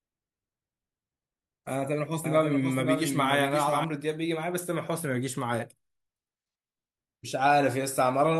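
From 2.24 s to 3.84 s the speech carries a doubled audio track. A second, full-band copy of the same audio runs about half a second behind the original and sits roughly 5 dB quieter. It has no decay and no room colour, so it sounds like a detached repeat rather than an echo. It cuts in and out abruptly at both ends. The likely cause is a second, slower capture path or an edit that left two out-of-step copies overlapping.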